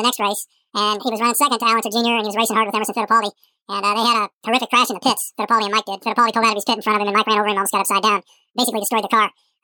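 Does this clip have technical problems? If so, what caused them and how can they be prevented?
Yes. The whole speech clip suffers from audio read two samples at a time (double speed). It runs at twice normal speed and a full octave (12 semitones) too high, so everything sounds chipmunk-like and rushed. The reader has taken each pair of samples as a single frame, which fits a mono stream being opened as stereo or a sample-width mismatch. Make sure the channel count and sample format in the header match what the decoder is told to expect.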